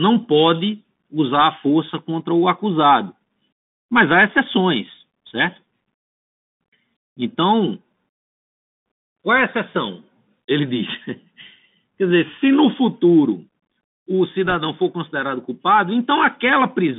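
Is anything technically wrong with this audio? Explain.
Yes. Throughout the clip the speech carries the sound of a Bluetooth CVSD headset codec. The band runs from 150 Hz to 3.6 kHz, and the character fits the 64 kbps one-bit delta coding used on headset links. Each sample only says up or down, and the step size adapts to the signal. Loud, fast-changing high content outruns the step, so sibilants turn scratchy and a granular hiss sits under the speech. On a spectrogram, everything stops sharply at the 3.6 kHz ceiling, with a grainy noise floor filling the band between words.

From 14.47 to 14.55 s, between "se no futuro o" and "for considerado culpado", there are bit errors on a Bluetooth voice link. The error rate is a bit under one percent. Each flipped bit nudges the delta-coded waveform by one step, which is larger where the speech is loud, and the error fades as decoding continues, so the burst sounds like a brief rushing crackle rather than a loud click. 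In the waveform it shows as fine jagged roughness with no tall spikes. On a spectrogram it appears as a short smear of broadband noise inside the band.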